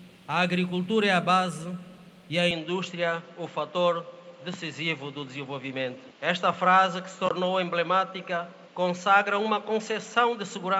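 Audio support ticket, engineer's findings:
Input switched to a poorer device from 2.51 s to end. Sound turns abruptly duller and boxier, level unchanged, no gap at the switch. Likely cause: capture moved to a narrower-band microphone or headset profile. Spectrogram shows a hard ceiling near 7.6 kHz from 2.51 s, plus a faint new noise floor well below the signal. Waveform envelope continuous across the change.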